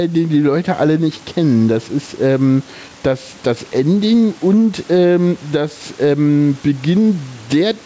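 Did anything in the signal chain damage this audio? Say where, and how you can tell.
Yes, in two places. Gain pumping is heard throughout. The gain swings by roughly 10 dB. Loud and soft passages sit unnaturally close in level. This points to a likely cause at the capture stage: the input gain was set far too high for the microphone, so a fast limiter or compressor in the chain keeps clamping down on every peak and releasing in the pauses.

Clock drift between sender and receiver shows up in the buffer stage as repeated timing corrections. They run from about 0.46 s, just after "den die", to 7.21 s. The sender's clock runs slow by around one and a half percent. To keep from draining, the receiver's jitter buffer repeatedly inserts short repeated pieces, always stretching the audio rather than cutting it. Playback comes out at about 98% speed, with roughly a tenth of a second added in total. 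The edits are unevenly spaced. The audio stops around 8 kHz, which fits the wideband call codec on this path.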